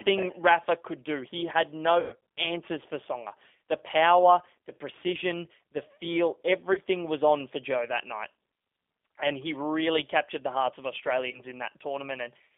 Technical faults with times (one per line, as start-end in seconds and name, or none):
0.00-12.57 G.729 codec
2.00-2.15 VoIP packet loss concealed by the speech codec
6.73-6.80 VoIP packet loss concealed by the speech codec
11.31-11.41 VoIP packet loss concealed by the speech codec